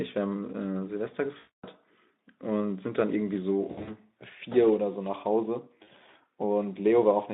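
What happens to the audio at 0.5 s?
At 0.5 s the speech is intact, carried through the Speex codec at 15 kbps over a 200 Hz to 3.7 kHz line band with only light coding roughness and no fault at that moment.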